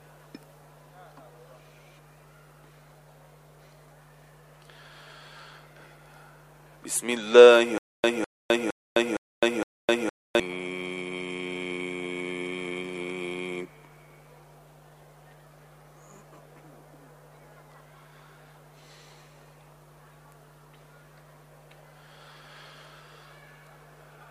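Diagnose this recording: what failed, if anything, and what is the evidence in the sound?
A stutter with silent gaps runs from 7.78 to 10.40 s. The same burst of roughly 204 ms plays five times, each followed by about 259 ms of digital silence, repeating every 462 ms at an even pace. The likely cause is a stalled playback or stream buffer: on each retry the player re-emitted its last fragment, then ran dry. The audio belonging to that stretch never arrived and is missing from the recording.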